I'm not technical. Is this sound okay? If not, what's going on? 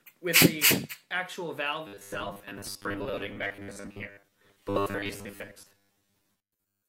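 No. From 1.87 s to the end, robotic sound from repeated short buffers: a rigid 100 Hz buzz, likely from repeating 10 ms chunks that replace most of the audio.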